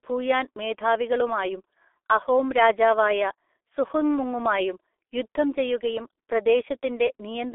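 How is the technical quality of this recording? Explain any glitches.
Technical quality is poor throughout. The G.723.1 codec artefacts run the full length of the speech: the coarse, hoarse texture fits a very low bitrate of roughly 6 kbit/s. The codec rebuilds speech in 30 ms blocks from a slowly updated voice model, so consonants smear. The telephone band spans 300 Hz to 3.5 kHz, with nothing above 3.8 kHz, leaving it muffled.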